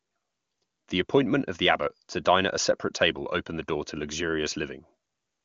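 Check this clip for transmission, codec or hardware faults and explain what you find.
No transmission, codec or hardware faults turn up in this speech clip, which comes through an AMR wideband (HD Voice) path at a rate that points to about 23.85 kbit/s.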